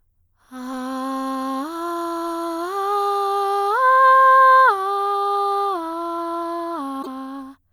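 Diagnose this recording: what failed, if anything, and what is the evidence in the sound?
A brief glitch breaks into the music from 6.99 to 7.07 s. This is damaged data in a compressed stream, a codec and storage fault: corrupted bytes garble those frames, and the decoder loses sync until it finds the next valid frame header.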